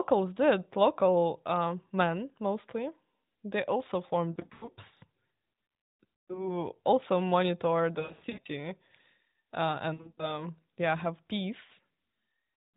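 At 4.32 to 4.70 s, 6.21 to 6.58 s, 8.00 to 8.47 s, 9.94 to 10.45 s and 11.66 to 11.72 s, the narrowband speech breaks up from lost AMR speech frames. Radio errors corrupted frames, and the decoder patched each gap by repeating its last good settings at falling gain. The first, third and fourth bursts are scattered dips and warbles. The 9.94 s burst has a run of about 100 ms, and sounds drawn out. The last is a brief blip.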